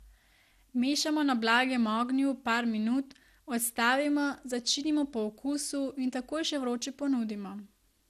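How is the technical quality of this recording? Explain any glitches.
Quality's fairly rough: the speech has a swirly, hollow character throughout. That's generation loss, the whole clip sounding like it has been through a lossy codec many times over, likely something on the order of seven encode–decode passes. Each pass re-quantises on a shifted frame grid, so noise and spectral gaps pile up. The smeared consonant attacks and the hard ceiling near 14.3 kHz fit an MP2-style chain at around 96 kbit/s, but the swirl is worse than that rate alone would give.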